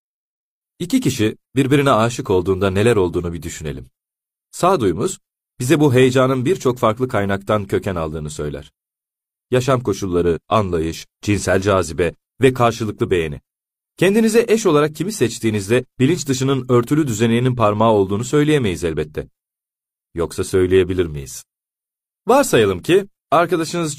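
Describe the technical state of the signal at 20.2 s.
At 20.2 s the speech signal is intact, with no audible fault at that moment.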